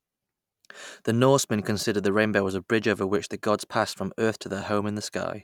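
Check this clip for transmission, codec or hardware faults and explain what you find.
I find no faults to explain in this clip.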